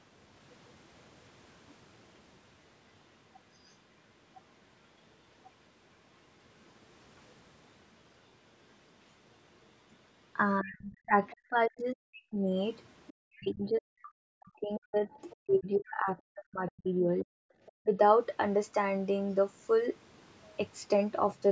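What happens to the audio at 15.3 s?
At 15.3 s the speech sits inside a stretch of speech suppressed in double talk, from 13.21 to 17.38 s. It dips by up to around 40 dB, likely because the echo canceller turned everything down while both sides talked. From 15.3 to 15.36 s there is also a brief scrap of the other side's voice leaking through, faint at around 30 dB below the speech. It likely comes from loudspeaker echo the canceller missed.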